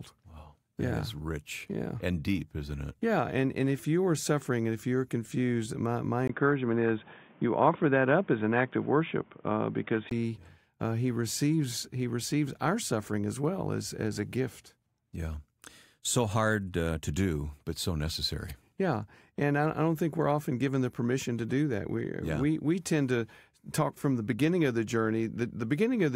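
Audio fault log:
6.28 to 10.11 s, input switched to a poorer device. Right after "you're confused my my", the speech goes dull and boxy, with nothing above 3.6 kHz. A 20 ms gap marks the switch. A faint new background noise sits well below the speech, and loudness barely changes. The likely cause is the recording moving to a lower-grade microphone or a headset call profile, which passes a narrower band and adds its own noise floor. Full bandwidth returns at 10.11 s.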